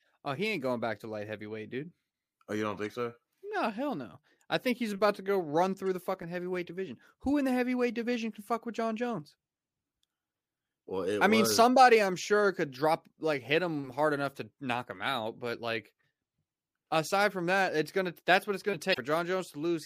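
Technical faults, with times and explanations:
2.84 s, 5.87 s and 18.90–18.98 s, damaged data in a compressed stream: three glitches in the speech. There's a tiny glitch right after "you don't", another between "about to go run" and "the fucking heavyweight division", and a longer glitch of roughly 80 ms after "that's what it's gonna". Corrupted bytes in the compressed stream make the decoder misread those frames and lose sync until it finds the next valid header, which comes out as these short, unnatural glitches.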